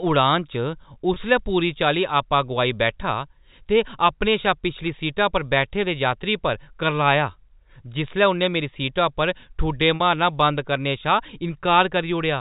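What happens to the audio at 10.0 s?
Just before 10.0 s, from 9.96 to 10.00 s, there is packet loss with pitch repetition. About 40 ms of audio, which fits two lost packets, is bridged by repeating the last pitch period. Unlike a silent dropout or a clicky stutter, it sounds like a brief held, buzzy tone.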